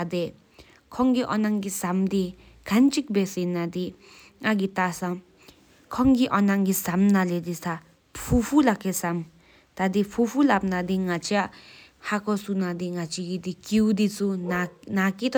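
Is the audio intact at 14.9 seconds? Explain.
Yes, at 14.9 seconds the speech plays through intact, with no dropout, click, distortion or other fault.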